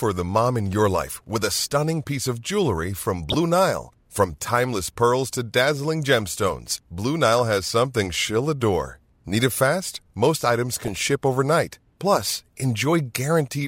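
Weak DAB reception let bit errors slip past error correction into the MP2 data of this speech clip, causing DAB burbling. Corrupted sub-band levels give brief patches of burbling at 3.30–3.34 s after "piece of jewelry from", at 7.39 s before "has something she'll adore", and at 10.85–10.97 s.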